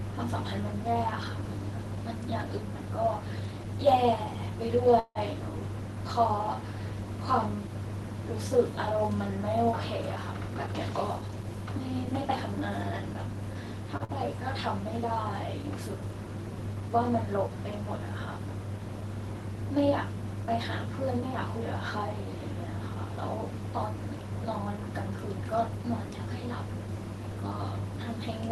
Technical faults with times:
4.99-5.18 call audio freeze
10.16-11.44 jitter buffer speed-up
13.97-14.03 short stall from a late packet
14.04-14.11 short concealed packet loss

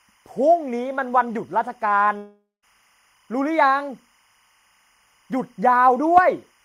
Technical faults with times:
0.00-6.64 timecode bleed
2.17-2.64 long network dropout

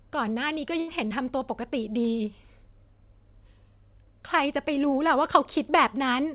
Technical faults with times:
0.80-0.91 burst of packet loss
1.08-1.13 short concealed packet loss

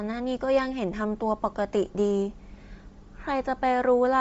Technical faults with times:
0.00-4.21 Bluetooth LC3 compression

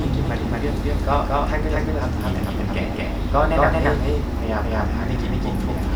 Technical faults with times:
0.00-5.95 doubled audio track

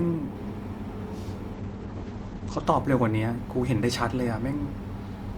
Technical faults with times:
1.55-2.71 call bitrate drop

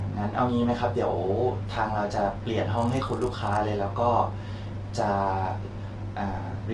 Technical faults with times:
0.00-6.73 low-delay AAC compression
2.77-3.58 filter restarted on every block

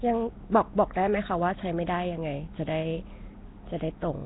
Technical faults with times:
0.00-4.25 Nellymoser compression

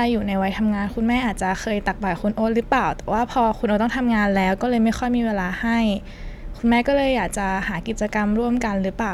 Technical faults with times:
none

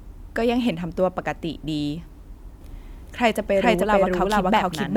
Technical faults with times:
2.61-4.96 doubled audio track

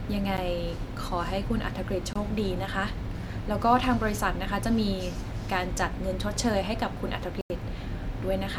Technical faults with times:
0.37 Bluetooth stall
2.13-2.16 Bluetooth stall
7.41-7.50 Bluetooth stall

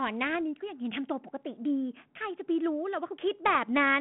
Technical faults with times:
0.35 bit errors on an ADPCM link
3.48-3.58 bit errors on an ADPCM link

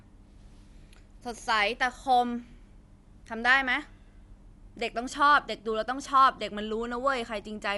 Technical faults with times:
0.00-7.77 Dolby Digital compression

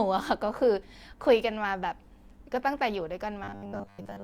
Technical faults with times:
3.44-4.24 robotic sound from repeated short buffers

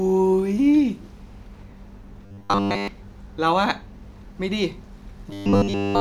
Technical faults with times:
2.26-2.88 robotic sound from repeated short buffers
5.31-6.01 robotic sound from repeated short buffers

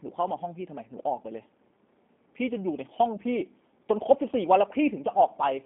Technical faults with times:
0.00-5.66 G.729 codec

